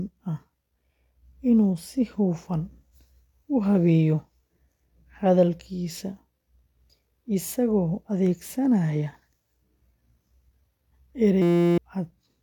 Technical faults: system hang loop

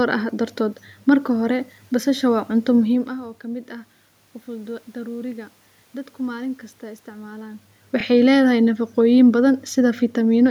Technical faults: overlapping chunks

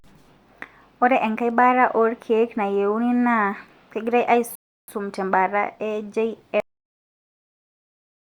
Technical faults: rebuffering stall; cut-off end

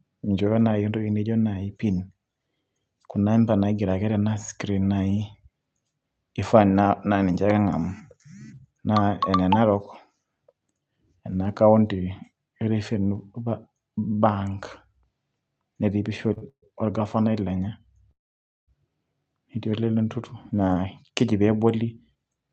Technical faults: short stall from a late packet; call audio freeze; jitter buffer speed-up

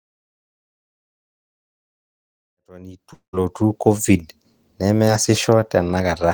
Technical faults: long network dropout; short concealed packet loss

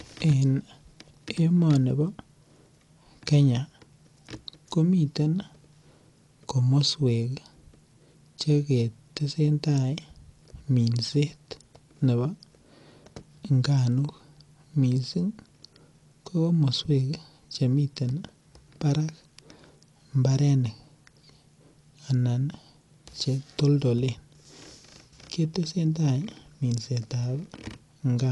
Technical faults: Dolby Digital compression

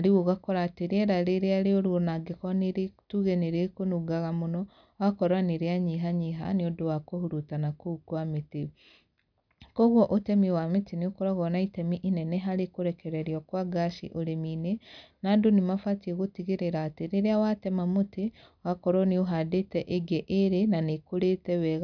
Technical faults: none

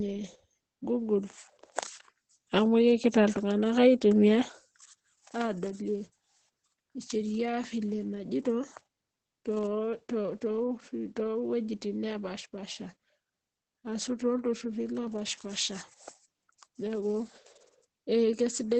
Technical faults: Opus voice compression

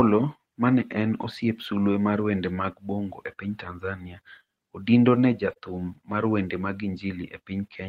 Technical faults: lost packet rebuilt from error correction; short concealed packet loss

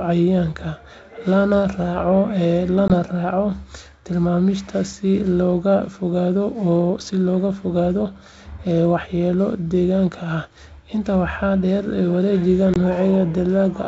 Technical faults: packet loss on an ADPCM call

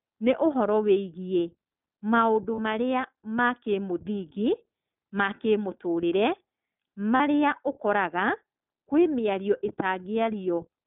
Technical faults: iLBC codec; lost iLBC frames

